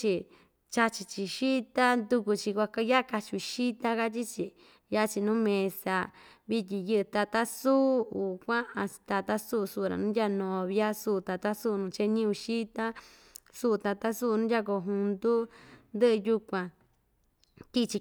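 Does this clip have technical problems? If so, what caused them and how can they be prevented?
Yes. At about 7.14 s the speech has a repeated buffer: a single 5 ms block of audio plays twice in a row, with a hard join where the copy begins. Because the block is so short, the repeat is heard as a click or brief buzz rather than a stutter, and essentially no audio is lost. The playback device ran out of fresh samples before its deadline and replayed the last block it held. To prevent it, use larger playback buffers or give the audio thread higher scheduling priority so new data always arrives on time.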